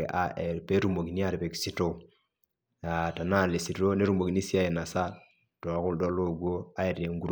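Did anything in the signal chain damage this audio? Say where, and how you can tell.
No, no damage is audible.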